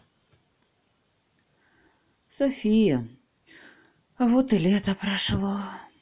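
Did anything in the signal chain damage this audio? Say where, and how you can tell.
No, nothing in this speech recording stood out as damage from any stage of the chain on listening.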